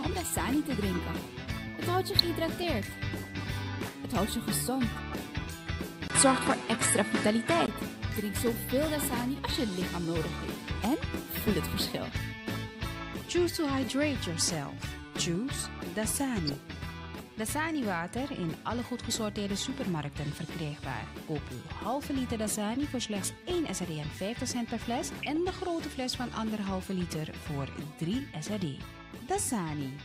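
DAB burbling at 2.19 to 2.24 s: a brief burst where residual bit errors slip past error correction into the MP2 stream, corrupting sub-band data so short blips of noise appear in individual sub-bands.

At 6.08 s a 20 ms gap, then a boxier, duller sound until 7.68 s: likely an input switched to a poorer device. Nothing above 11.4 kHz survives, level shifts by about 5 dB, and a new noise floor sits about 30 dB below the signal.

The DAB burbling returns at 16.47 to 16.54 s and again at 25.23 to 25.36 s, the later one longer and lighter in density. Each is a short burst of corrupted sub-band data.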